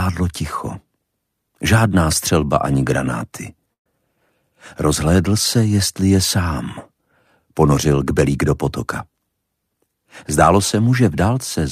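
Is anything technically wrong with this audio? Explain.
Yes. A burst of packet loss occurs from 3.73 to 3.86 s. About 120 ms of consecutive audio never reached playback in time, so the receiver filled the gap by repeating the last received sound and fading it down. It fades quickly, leaving roughly 110 ms of near silence. The audio then resumes further along, with those 120 ms of the original missing, so the sound jumps forward abruptly.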